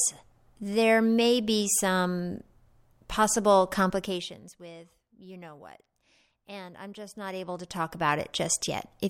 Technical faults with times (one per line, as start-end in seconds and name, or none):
3.88-4.56 zipper noise
7.12-8.24 zipper noise